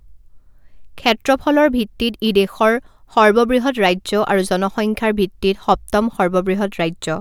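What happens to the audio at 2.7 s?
Nothing goes wrong at 2.7 s: the speech carries on intact through that moment, with no dropout, click or distortion.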